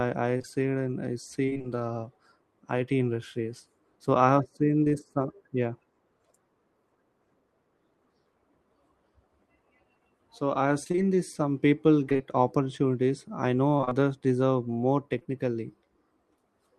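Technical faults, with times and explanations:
0.37–1.66 s, repeated packet loss (robotic sound): seven gaps, none over 23 ms, add up to about 140 ms of missing audio. Each one is patched by extending the preceding sound, which gives a choppy texture over the stretch.
10.84–10.99 s (after "I have"), 12.09–12.21 s, 13.77–13.93 s (between "opportunities I" and "deserve more"), repeated packet loss (robotic sound): three to four gaps of up to 26 ms in each burst. About half of each burst is synthesised fill, so these bursts sound choppy and fragmented.
4.84 s (after "I have seen"), short concealed packet loss: a single 20 ms hole filled by continuing the last sound and blending back in. It is heard as a brief smear or wobble.
15.19–15.27 s, short concealed packet loss: two adjacent 20 ms holes are concealed one after the other. The roughly 40 ms of extrapolated audio produces a short wobble, and a brief sound there may drop out.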